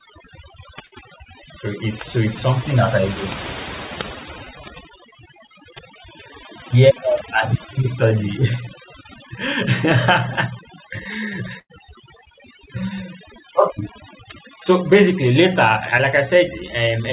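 Across the whole clip, overdone noise removal is at work. The suppressor has pushed individual frequency bands down to nothing wherever they sat close to its noise estimate, so the background collapses to near silence with twinkling specks, and the speech has its quieter components stripped away.

From 0.86 to 0.94 s there is a burst of packet loss. The receiver bridges about 56 ms by extending the last sound and fading it, heard as a held buzz or decaying hiss, before playback resumes with roughly 60 ms of the speech gone. A second, longer burst runs from 11.60 to 11.72 s, where about 99 ms is filled the same way and about 100 ms is missing.

From 15.98 to 16.01 s comes a short concealed packet loss. About 12 ms of synthetic continuation covers the gap, with 20 ms of audio missing, before blending back into the real signal, giving a brief smear or wobble at that point. Over the call path, nothing reaches above 4 kHz, which fits a narrowband G.711 codec.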